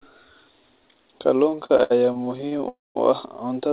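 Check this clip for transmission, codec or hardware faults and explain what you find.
Two network-timing faults appear in this speech, both from 1.5 s on, carried over a narrowband call path that stops at 4 kHz, as G.711 mu-law does.

Repeated stalls (stutter), 1.5 to 2.64 s: the jitter buffer kept running dry, about twenty short times, the longest 69 ms. Each time the last sound was stretched to bridge it, roughly 320 ms in all, over a quarter of the span. Speech drags and stutters. Unlike a freeze, the breaks are many and brief.

Call audio freeze, 2.68 to 2.97 s, just before "u ah": one held-up gap of 272 ms, likely from packets delayed in transit emptying the buffer. The last sound is continued briefly, then about 190 ms of silence, and speech resumes where it stopped. A single long hold marks it apart from the stutter's choppy run.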